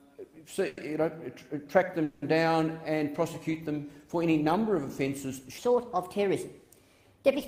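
At 0.67 s there's a short call audio freeze, then another at 2.04 s. Each time the last bit of sound gets stretched into a fading buzz, about 100 ms and then 180 ms, before things pick up where they left off, nothing lost, just pushed later. Likely packets held up long enough to drain the jitter buffer.

From 5.58 s to the end, the section is at the wrong speed, running 1.31 times too fast, so everything jumps up roughly five semitones and sounds hurried, likely played against the wrong clock.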